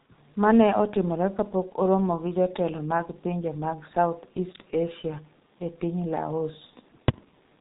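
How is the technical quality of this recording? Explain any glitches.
Quality is poor: the speech runs through a G.723.1 codec for its whole length, and the damage is heavy. Nothing reaches above 3.8 kHz, so the voice sounds muffled, and the coder's slow-updating voice model over long 30 ms frames leaves it hoarse, with consonants smeared together. The coarseness fits a rate around 6 kbit/s. A simple low-pass filter would dull the sound without the hoarseness or the blurred consonants.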